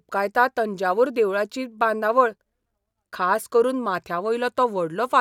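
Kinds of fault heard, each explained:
Nothing stood out on listening to the speech here.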